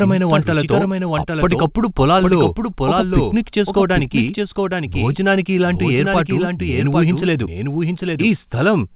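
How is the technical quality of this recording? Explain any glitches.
The speech is heard twice throughout: a second, somewhat quieter copy, about 5 dB down, trails the original by roughly 0.7 s, with no reverberant tail or room colour. This doubled audio track likely comes from a slower capture path or an edit holding two copies out of step. The call path's band limit leaves nothing above 4 kHz in either copy.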